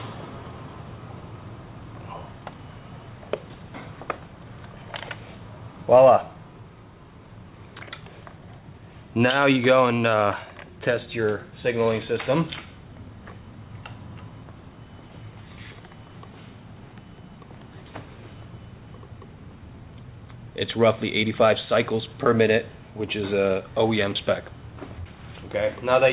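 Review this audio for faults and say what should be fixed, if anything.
Nothing here needs fixing, since the sound just has the narrow, telephone-style band you'd expect from a call path like G.711, with nothing above about 4 kHz.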